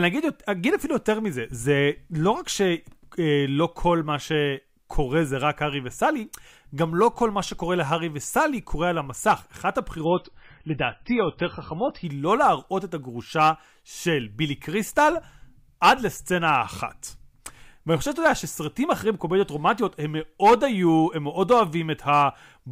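Speech with an adaptive stream dropping to a lower bitrate from 10.05 to 12.05 s: treble vanishes above 5.5 kHz and artefacts thicken, which fits a fall from roughly 128 kbit/s to under 20 kbit/s, with no gap.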